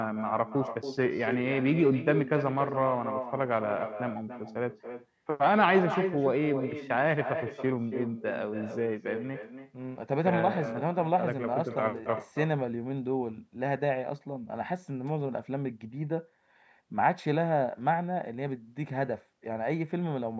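From start to finish, the speech carries an echo with no canceller. The far end is playing the call through a loudspeaker. Its microphone catches that sound and sends it straight back, and nothing removes it. Each phrase returns roughly a third of a second later. The copy sits about 8 dB below the direct speech. It sounds thinner, like a shadow trailing every syllable. The band-limited call processing, with nothing above 8 kHz, is heard in both.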